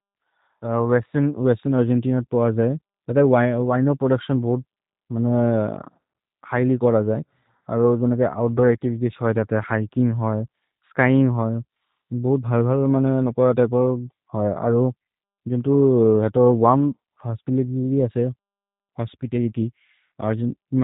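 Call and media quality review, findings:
Speech rough, buzzy and slightly synthetic throughout, whole clip; dull, nothing above 3.8 kHz. G.729 codec, consistent with the G.729A variant at 8 kbit/s: speech resynthesised from a vocal tract filter, pitch predictor and sparse pulses per 10 ms frame, discarding fine detail.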